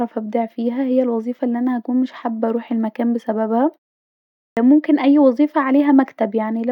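At 4.39 s, after a pause of about 0.69 s, there is a clipped start after a pause. The playback path seems to have gone idle during the quiet stretch and was slow to come back. The first 178 ms of sound after the gap never reach the output. Speech resumes abruptly at 4.57 s, just before "اي وظيفه", with its opening sounds cut away.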